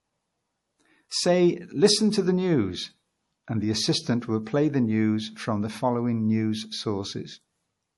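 Speech that was likely first encoded as low-bitrate MP3 and then re-saved at a much higher bitrate, a case of low-bitrate audio saved at a high bitrate. Throughout the clip nothing is present above 11.5 kHz, a cut-off that fits an original encode near 48 kbit/s, which the later 192 kbit/s file cannot restore.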